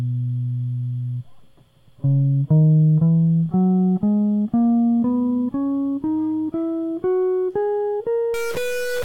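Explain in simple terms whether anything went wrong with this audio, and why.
A stuck bit appears from 8.34 s to the end of the music at 9.05 s. The sound turns harsh and buzzy, and even the quieter moments fill with a gritty noise. The likely cause is a broken connection or converter that forces one digit of each stored number to stay fixed. Because that digit carries a fairly large share of the value, many samples jump away from where they belong, roughening the music.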